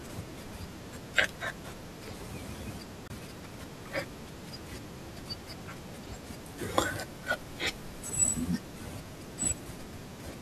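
A speech clip with one short Bluetooth dropout. From 3.08 to 3.10 s the audio cuts to silence for about 23 ms, then resumes further along as if it had kept playing. The gap points to a single lost packet, likely from a late wireless transmission to the headphones.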